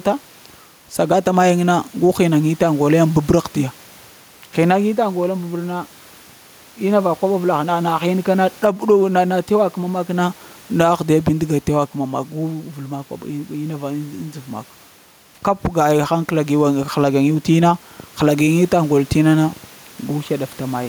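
A speech recording with gain pumping throughout. The room noise sits about 33 dB below the speech, and the gain swings by around 5 dB as loud syllables arrive. Loud and quiet passages are pulled close together, leaving the speech squashed. The likely cause is input gain set far too high, with a fast limiter or compressor clamping down on every peak.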